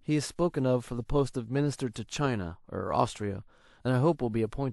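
On listening, nothing in the recording stood out as a technical problem.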